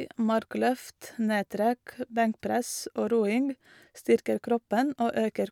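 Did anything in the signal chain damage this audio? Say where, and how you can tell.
No, no signal-chain damage heard.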